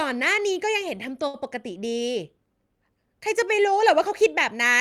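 At 1.27 s the speech hits a short stall from a late packet, lasting until about 1.36 s. The next packet had not arrived when it was due, so the jitter buffer ran dry and the receiver held the last sound for 64 ms until the data came in. Nothing is dropped; playback resumes where it stopped, now 64 ms later. It is heard as a sound held unnaturally long, with a faint buzz or dip.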